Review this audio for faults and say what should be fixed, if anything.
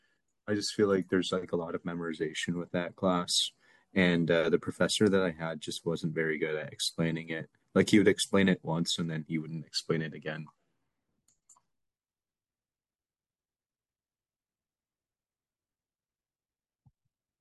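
Nothing to fix in this speech recording, as no faults are audible anywhere in it.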